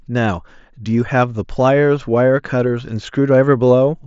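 No faults found; the speech comes over a Bluetooth mSBC headset codec link with nothing above roughly 7.7 kHz.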